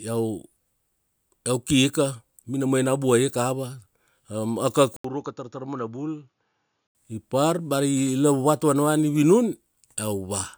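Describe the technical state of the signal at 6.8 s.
At 6.8 s the speech is inside a stretch from 4.96 to 6.95 s that sounds like the input switched to a poorer device. It likely moved to a narrower microphone path. Nothing reaches above 7 kHz, so the voice turns dull and boxy. It is roughly 10 dB quieter, with a faint new noise floor about 50 dB down. The switch begins with an 80 ms silence. The poorer sound starts just before "ipar bea ari lavuvat".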